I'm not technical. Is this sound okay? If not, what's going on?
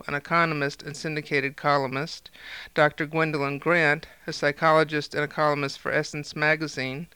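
Yes, this one sounds fine, with nothing wrong that you'd notice anywhere in it.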